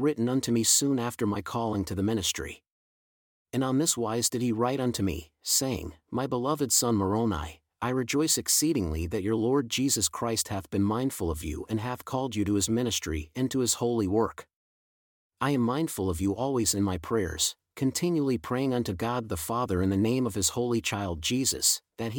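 No technical fault can be heard anywhere in the recording: the signal stays continuous throughout.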